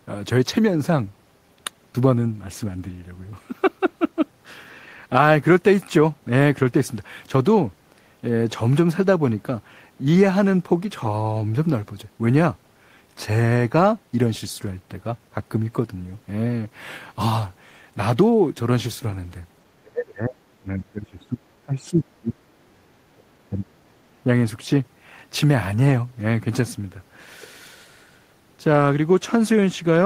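An echo canceller, likely confused by both sides talking at once, turned the talker down, causing speech suppressed in double talk at 19.74, 20.61, 21.64, 22.59 and 23.5 s. Each time the speech sinks by some 20 to 30 dB for under a second, leaving it choppy.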